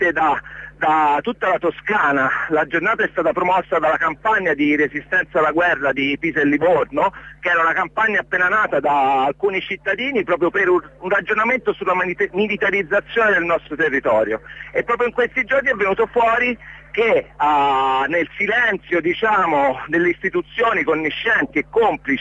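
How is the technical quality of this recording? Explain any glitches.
The technical quality of this recording is sound, with no glitches to explain.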